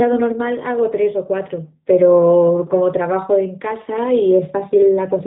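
G.729 codec damage runs throughout: nothing passes above 3.8 kHz, and the rough, synthetic speech, rebuilt from filter and pulse models, fits an 8 kbit/s stream.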